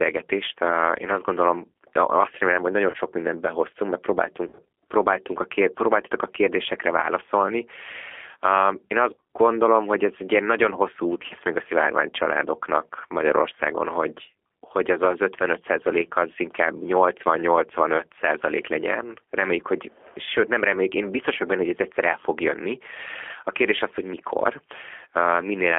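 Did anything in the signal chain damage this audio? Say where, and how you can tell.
Yes. The codec stage damaged it: the whole clip passed through G.729 at 8 kbit/s, which rebuilds speech from a filter, pitch predictor and sparse pulses. You hear a band held to 300 Hz to 3.4 kHz and a plainly rough, synthetic edge throughout.

The network also dropped packets, which the speech codec concealed by extrapolating from its last pitch and filter at falling gain. This leaves buzzy or noisy, fading smears that linger as the decoder recovers. The first is at 2.91 to 2.97 s, about 30 ms lost. The second is at 4.45 to 4.61 s, after "mindent behoztunk mert" and before "próbáltunk a kér próbáltatok", about 100 ms lost over 140 ms. The third is at 9.13 to 9.22 s, before "gondolom hogy ez egy", about 90 ms lost. The last is at 11.26 to 11.33 s, between "ilyen nagyon hosszú út" and "még a szivárvány családoknak", about 40 ms lost.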